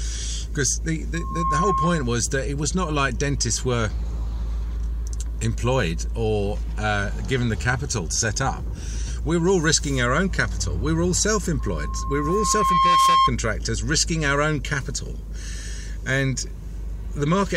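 Loudspeaker feedback squeal at 1.14–2.21 s and 11.59–13.32 s: the microphone hears its own loudspeaker, and at 1.1 kHz the loop gain passes one, so that tone swells by itself, in about a third of a second first, then over roughly 1.5 s and louder.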